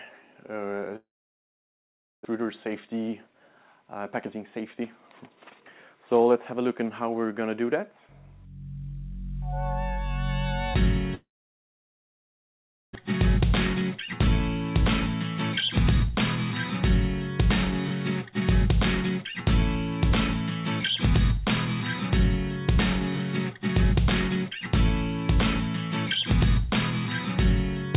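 At 0.96 s the sound breaks into a short fading buzz and then about 1.2 s of silence, returning at 2.27 s with roughly a second of material simply gone. This is a long network dropout. Packets stopped arriving, and the receiver stretched the last sound before giving up. The likely cause is a network stall that also pushed the delay out by about 0.3 s. The same happens from 11.15 to 12.97 s. About 1.7 s of that gap is silent, a second is lost, and the delay grows by around 0.7 s.

From 2.35 to 6.28 s the audio runs noticeably hurried at unchanged pitch, about 6% fast. This is a jitter buffer speed-up: with a backlog after the stall, the receiver snipped out short pitch-period slices, around 0.3 s in total. Milder bursts follow from 18.30 to 20.11 s at about 2% fast, shedding roughly 40 ms, and from 22.10 to 24.51 s at about 3%, shedding roughly 70 ms. Throughout, the G.711 A-law call path leaves nothing above 4 kHz, which fits a 64 kbps stream.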